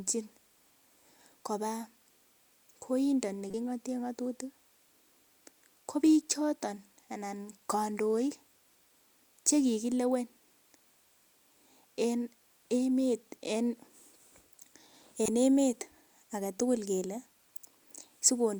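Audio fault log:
3.49–3.54 s and 15.25–15.28 s, corrupt frame decoded: two quick chirpy blips where the decoder played damaged compressed frames anyway, so misread gains and codes put energy in the wrong frequencies. The first covers a few frames and peaks around -25 dBFS; the second, about two frames, is noticeably louder.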